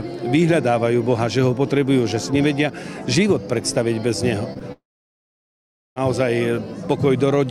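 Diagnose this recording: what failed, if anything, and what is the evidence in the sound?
Network stage, short concealed packet loss: about 20 ms failed to arrive at 4.53 s and again at 4.59 s, and the decoder extended the preceding sound, leaving two brief smears.

Network stage, likely a long network dropout: from 4.72 to 5.98 s nothing arrived. A short fading continuation gives way to about 1.15 s of silence, and the sound then resumes without the lost stretch.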